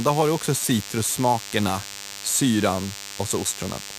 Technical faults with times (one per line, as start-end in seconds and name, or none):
0.00-3.99 DECT cordless phone buzz